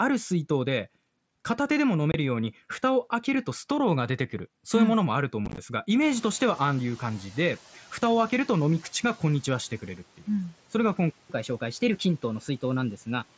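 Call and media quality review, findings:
Unconcealed Bluetooth headset packet loss, 2.12–2.14 s: 22.5 ms hard dropout with abrupt edges, which fits three lost 7.5 ms mSBC frames. Again 5.46–5.58 s: 67.5 ms lost, scattered across 120 ms, longest gap 15 ms, so a chopped, crackly stretch. Waveform shows abrupt notches, and the spectrogram shows full-band vertical gaps.

Noise suppressor catching up, 6.0–7.91 s: room noise jumps about 21 dB at 6.0 s and first passes through under-suppressed. The suppressor's noise estimate lags, then adapts over 1.91 s, cutting the noise by about 7 dB. Spectrogram shows a broadband noise floor stepping up, then fading downward.

Playback stall, 11.10–11.30 s: output stops dead mid-flow for about 194 ms, likely a jitter-buffer underrun or blocked audio thread in the player. Waveform shows an abrupt flatline, and the spectrogram shows a clean blank column across all bands before the sound resumes.

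Catch-up at higher speed, 11.30–13.23 s: the player resamples its backlog at 1.1× speed, so the sound runs fast and pitch rises roughly one and a half semitones before dropping back. Spectrogram shows harmonics shifted upward and compressed in time, returning to normal at 13.23 s.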